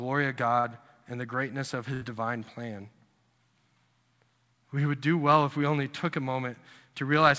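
Short concealed packet loss at 0.60 to 0.66 s, in this speech clip, leaves a brief smear just before "and the greatness of". About 40 ms of the call arrived too late for the decoder, so the receiver extended the preceding sound for that gap and blended back into the real signal, which is why the passage wobbles rather than dropping out cleanly. A burst of packet loss follows at 1.94 to 2.03 s, between "and the greatness of" and "divine plan". Here roughly 80 ms went missing in a row. The receiver stretched the last sound across the hole, turning it down as the gap went on, then jumped ahead to the later audio, so the material in that span is simply gone. Both gaps came through a call path whose sound stops at 8 kHz, consistent with a G.722 codec at about 64 kbps.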